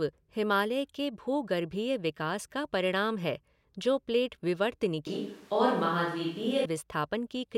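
From 5.07 to 6.65 s the close microphone likely drops out and a distant one carries the speech instead, a switch to a distant microphone. The voice turns suddenly roomy and hollow with thinner bass, at much the same level, with room noise roughly 30 dB below the speech, and snaps back just as abruptly.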